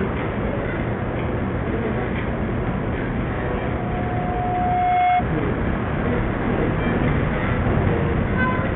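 From start to finish the treble is missing above 3.8 kHz, and a gritty, grainy roughness rides on the sound. This heavy damage is likely Bluetooth SBC compression at a very low bitrate, with the top sub-bands starved of bits and the rest coarsely quantised.

From 3.47 s to 5.25 s a steady 722 Hz tone swells over roughly a second and a half into a squeal, peaking at about 5 dB above the sound. This is loudspeaker feedback squeal: a microphone picked up its own loudspeaker and the loop ran away at that one frequency.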